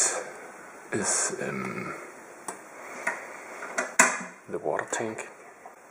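Damaged data in the compressed stream appears from 5.71 to 5.76 s, near the very end of the sound. For about 50 ms the decoder is fed frames whose bytes are wrong, so it decodes garbage or rejects them, loses its place in the bitstream and hunts for the next valid frame header. The result is a brief chirp, click or short hole that breaks abruptly into the audio, with normal sound resuming once sync is regained.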